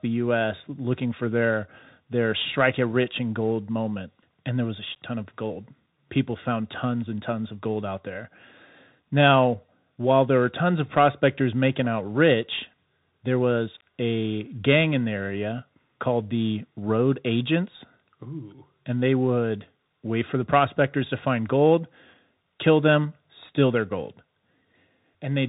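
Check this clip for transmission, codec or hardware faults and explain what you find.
The clip carries one codec fault, present for its whole length: Bluetooth CVSD headset codec damage on the speech. Nothing is heard above about 3.8 kHz, which fits narrowband CVSD running at 64 kbps. That codec encodes each sample as a single up-or-down bit with an adaptive step, so loud high-frequency energy outruns the step and distorts. The result is plainly audible: s sounds turn scratchy and a granular hiss sits under the speech.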